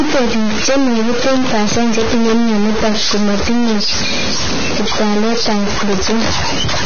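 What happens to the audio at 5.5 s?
At 5.5 s, as throughout the speech, a data bit is likely stuck at a fixed value, pushing about half the samples off by that bit's weight and giving distortion with noise in the pauses. Heavy Vorbis compression, which fits a bitrate near 19 kbps, removes everything above 6.5 kHz and turns fine detail into hissy, grainy noise.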